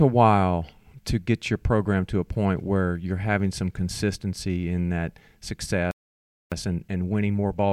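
At 5.91 s the speech cuts off mid-flow and the output is silent until 6.52 s, a gap of about 0.61 s. This playback stall likely came from the player running dry of data or having its thread blocked. The waveform drops to a flat line, and the spectrogram shows a clean empty band.

From 6.52 s to the end, the player works off its backlog with time-compressed catch-up. It trims and cross-fades small slices so the speech runs about 1.1 times faster at unchanged pitch, giving a hurried delivery. On the spectrogram, harmonics keep their spacing while syllables crowd closer together.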